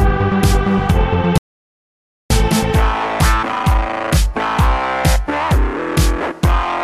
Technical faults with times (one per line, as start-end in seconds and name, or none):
1.38-2.30 audio dropout to silence